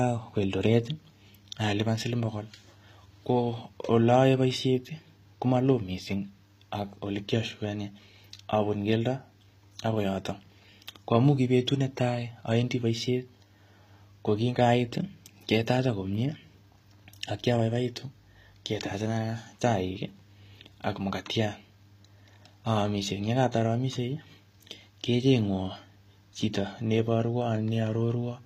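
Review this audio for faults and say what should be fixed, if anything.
The speech runs through what is likely HE-AAC compression at a low rate, with the encoder coding only the lower band and synthesising the treble by spectral band replication, which fits a bitrate around 24 kbps. That rebuilt top end doesn't line up with the real harmonics, so s sounds come out gritty and metallic, the damage is plainly audible throughout, and nothing is present above 15.5 kHz. To prevent it, deliver the speech at a higher bitrate or in a codec that encodes the full band directly.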